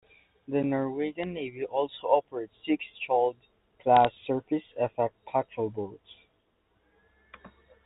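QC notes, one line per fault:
1.23 s, bit errors on a digital phone line: a brief hit over the speech. Flipped bits corrupted samples of the G.711 mu-law stream, and a hit on a sign or high-order bit throws that sample far from its neighbours.
3.97 to 4.13 s, bit errors on a digital phone line: a short burst of crackle over the speech, which itself stays unchanged. Scattered flipped bits, at an error rate well under one percent, each spike a single sample.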